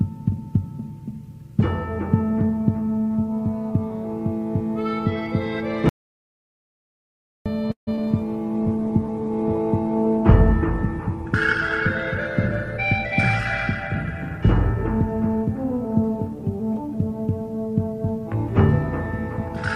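From 5.89 to 7.46 s there is an audio dropout to silence: about 1.57 s of pure silence with no room tone, likely from the input being lost while writing continued.

At 7.71 to 8.03 s a call audio freeze stretches the last sound for roughly 156 ms, including 120 ms of silence, before resuming intact. Packets were likely held up and the jitter buffer ran empty, adding delay without losing content.

Inside that span, at 7.95 to 7.99 s, short concealed packet loss replaces about 20 ms of missing audio with 24 ms of extrapolated fill, heard as a brief smear.

From 8.56 to 14.26 s a call bitrate drop takes the encoder from 48 to 13 kbps and narrows the bandwidth from 20 kHz to 12 kHz, so the sound turns rough and duller.

From 15.21 to 16.36 s a jitter buffer speed-up plays at 108% by trimming pitch periods, removing around a tenth of a second, so the audio sounds hurried at unchanged pitch.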